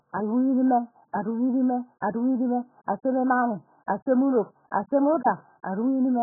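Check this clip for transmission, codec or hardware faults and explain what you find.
The speech carries heavy AAC compression damage for its whole length, likely from AAC-LC at a very low bitrate, around 8 kbps going by the sound. With so few bits per frame, the encoder sets a low cut-off and leaves nothing above about 1.8 kHz. The speech sounds dull and muffled, with smeared consonants and a warbling, fizzy texture where the spectrum breaks into holes.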